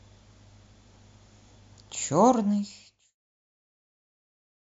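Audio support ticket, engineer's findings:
Findings: no fault found in the speech; the level eases down smoothly from around 2 s to 3.18 s, a normal edited fade-out with no click.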